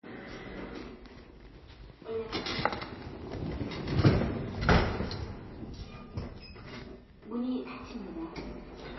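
From start to finish the audio carries plainly audible MP3 compression damage, likely from an encoder starved of bits, and the sound points to a very low rate, around 24 kbps. Nothing survives above 5.8 kHz, so the top end is sheared off flat. What separates this from a plain low-pass filter is the texture below the cut: weak frequency components flicker in and out between frames, giving a watery, swirling quality rather than a clean, dull roll-off.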